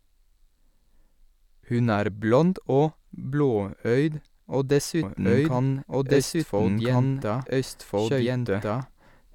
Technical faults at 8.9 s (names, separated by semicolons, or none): doubled audio track